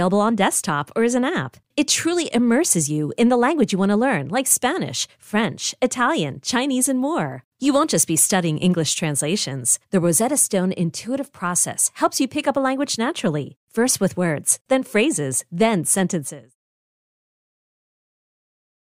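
There are no technical faults to describe in this speech clip, and the level easing out near 16 s is a deliberate editorial fade.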